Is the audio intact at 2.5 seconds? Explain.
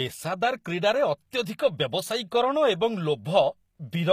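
No. At 2.5 seconds, as throughout the whole clip, the speech carries HE-AAC compression damage, likely from an encoder that codes only the lower spectrum and rebuilds the treble by copying lower bands upward under a coarse envelope. The damage is plainly audible and points to a low bitrate around 24 kbps. The top end stays bright but is synthetic, with harmonics misaligned across the crossover, so s sounds come out gritty, metallic or lispy.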